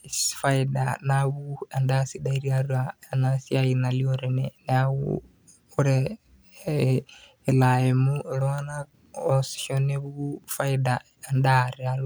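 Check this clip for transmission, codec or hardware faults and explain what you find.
Nothing stood out on listening to this speech recording that would point to a transmission, codec or hardware problem.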